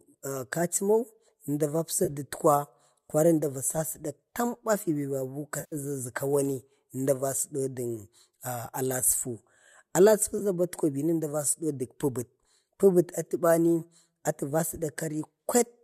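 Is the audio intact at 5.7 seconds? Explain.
No. From 5.60 to 5.76 s the sound turns smeared and noisy. This is AAC frame loss with concealment: the decoder rebuilt the missing frames from the last good spectrum.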